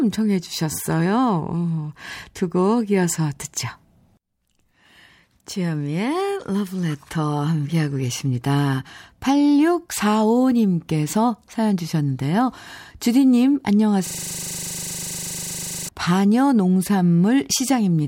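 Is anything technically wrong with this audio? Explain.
Yes. From 14.07 to 15.89 s the speech is replaced by a system hang loop. The driver stalled while the hardware kept replaying one 40 ms slice of its ring buffer, about 45 times, producing a steady, rough buzz at 25 Hz.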